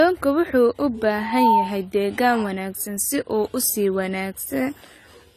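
Throughout the speech, nothing sounds above 14 kHz, and the top end is dull and smeared, with a fizzy warble on sibilants. That points to AAC compression, likely AAC-LC at around 32 kbps. Unlike plain low-pass filtering, bands below the cut-off also flicker and fill with noise.

From 1.14 to 1.8 s a loudspeaker feedback squeal rises at 907 Hz. The mic is re-amplifying its own speaker output, and the tone swells over about a third of a second to roughly 5 dB above the speech. Its growth from nothing sets it apart from a steady interference whistle.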